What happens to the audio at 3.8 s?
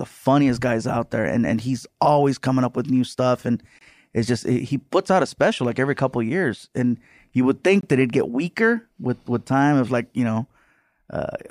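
A gap between chunks opens from 3.79 to 3.81 s, after "with new stuff and". Chunked playback leaves a 23 ms silent hole.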